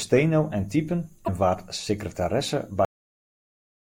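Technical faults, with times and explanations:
1.24–1.29 s, broken MP3 bit reservoir: Frames were likely cut from the stream, so the next frame fetched its borrowed bits from the wrong bytes. The sound jumps ahead through a brief damaged stretch of about 44 ms, under two frames of roughly 26 ms each.
2.85 s, cut-off end: The final buffers were never written or played, so the speech halts abruptly mid-sound. There is no natural decay; the output drops straight to digital silence, which holds for the last 1.1 s.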